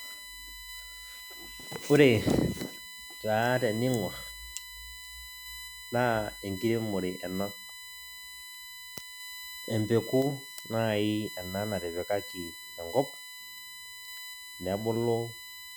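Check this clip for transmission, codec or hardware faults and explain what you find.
One hardware fault runs through the whole speech clip: USB whine. A steady tone sits at 1 kHz, strongest at its 2 kHz harmonic, around 15 dB below the speech. The bus draws current in 1 ms frames, and that pulse leaks into the audio through power or ground. Unlike mains hum, which sits at 50 or 60 Hz and its harmonics, this whine is high, thin and fixed on the 1 kHz grid.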